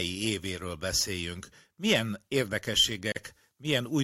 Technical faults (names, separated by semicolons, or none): gap at a join of encoded pieces